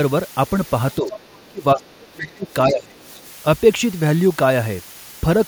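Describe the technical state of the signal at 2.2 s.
At 2.2 s the speech sits inside a double-talk suppression span from 1.48 to 3.01 s, dropping by up to roughly 25 dB, likely because an echo canceller attenuated the near talker while the far side spoke. Underneath, low bit depth with dither (7 bits) leaves a steady, even hiss about 25 dB below the signal, with no distortion.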